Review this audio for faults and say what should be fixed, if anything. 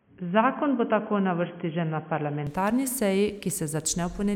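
The input likely switched to a poorer device, such as a headset's call profile, for the opening stretch from 0.0 to 2.47 s. That narrower path passes nothing above 3.3 kHz, so the speech sounds dull and boxy until it clears, with no gap and no clear change in level. Locking the recording to a single fixed input device for the whole session would prevent this.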